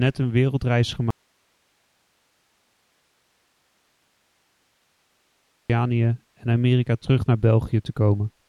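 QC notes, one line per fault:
1.1–5.7 s, audio dropout to a faint residue: the speech cuts off abruptly and returns just as abruptly about 4.6 s later, with only a low hiss, about 45 dB below the speech level, filling the gap. The path likely stayed live while the wanted signal was lost upstream, so the background noise carries on. Unlike a natural pause or a fade, there is no tapering, and unlike a hard mute the hiss continues.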